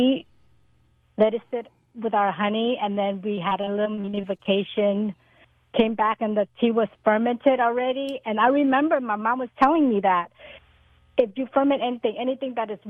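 From 3.35 to 4.49 s, repeated packet loss (robotic sound): fifteen short gaps, up to 40 ms each, patched by repeating prior sound. This gives a choppy texture, with smeared, stuttering blocks on the spectrogram.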